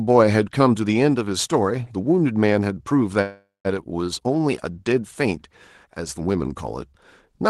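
From 3.21 to 3.67 s the speech stalls into a fading buzz and brief silence, then resumes where it left off. This is a call audio freeze, likely from delayed packets, not a dropout, because nothing is lost.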